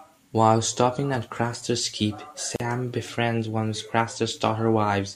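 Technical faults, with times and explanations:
2.56–2.60 s, gap at a join of encoded pieces: The speech drops into a gap of about 40 ms, just before "befriends one of", then resumes where it stopped. Two separately encoded pieces were joined untrimmed. Encoder start delay and last-frame padding left this hole, its edges smeared.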